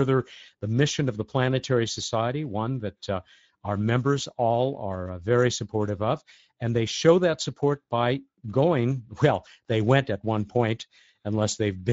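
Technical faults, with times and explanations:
Throughout, Speex codec damage. The speech sounds noisy and hoarse. Too few bits describe the excitation, which fits a Speex rate near 17 kbps.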